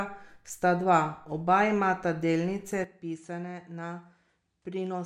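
At 2.84 s, right after "dva oba imata delnice", the speech suddenly loses its top end, with nothing above 10.5 kHz, and drops roughly 10 dB with a faint new hiss and no gap. That's likely an input switched to a poorer device mid-recording.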